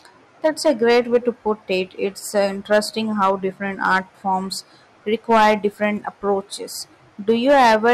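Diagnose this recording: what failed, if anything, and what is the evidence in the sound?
Hard clipping on the speech peaks: the level overran what the converter or gain stage could pass, so the tops got sliced flat. There's clipping distortion at 0.45–1.28, 2.37–2.79, 3.21–3.31, 3.83–3.98, 5.30–5.85 and 7.29 s to the end, pushed roughly 4–10 dB over, worst around 5.3 s.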